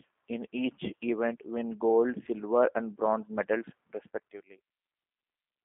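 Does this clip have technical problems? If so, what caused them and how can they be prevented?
Yes. Throughout, the speech sounds rough, buzzy and slightly synthetic, squeezed into a narrow band of 250 Hz to 3.4 kHz with nothing above 3.6 kHz. This is G.729 codec damage, where the speech is rebuilt from a few pulses per frame, which fits an 8 kbit/s stream. To prevent it, carry the call over a wideband codec such as G.722 or Opus instead of G.729.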